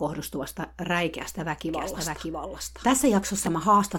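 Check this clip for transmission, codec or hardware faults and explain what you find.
One fault is present in this speech recording. A doubled audio track runs from 1.69 s to 3.47 s: a second full-band copy of the speech sits roughly 0.7 s behind the original, a few dB quieter. It is likely caused by the signal being captured again through a slower path, or by an edit that left two copies out of step. The copy is dry, with no decay or room colour, and it cuts in and out abruptly at both ends.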